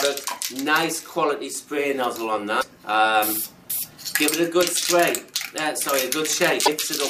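Damaged data in a compressed stream breaks this audio in two places: at 2.58 to 2.63 s and again at 6.62 to 6.68 s, the encoded bytes arriving at the decoder were corrupt. Each time the decoder could not make sense of the frames, lost sync and had to hunt for the next valid frame header before resuming. Each corrupt stretch comes out as a chirp, squawk, click or short hole of roughly 60 ms that cuts across the surrounding sound.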